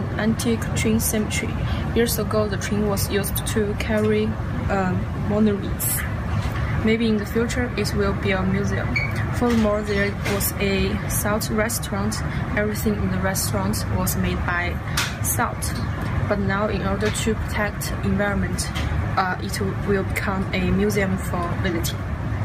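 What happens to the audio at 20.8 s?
Nothing goes wrong at 20.8 s; the audio plays through that moment intact, with no dropout, click, distortion or other fault.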